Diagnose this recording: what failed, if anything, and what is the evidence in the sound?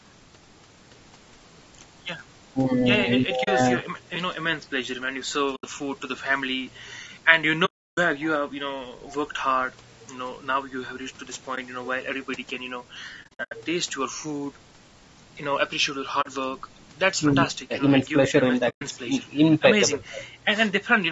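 The codec stage degrades the whole clip: the speech is rough and grainy, with noise filling the gaps between harmonics. This is likely low-delay AAC compression (AAC-ELD) at a low bitrate, near 32 kbps. Short frames resolve pitch poorly and starve the bit budget. The band stops at 8 kHz from call processing.

AAC frame loss with muting on the network-to-decoder path leaves a brief dip and soft-edged holes at 3.43 s (40 ms), 5.55 s (80 ms), 7.65 s (320 ms), 11.55 s (20 ms), 13.23 s (200 ms scattered over 280 ms, longest run about 70 ms), 16.21 s (40 ms) and 18.69 s (120 ms). The decoder zeroed the lost frames, and the overlapping windows faded the sound out and back in.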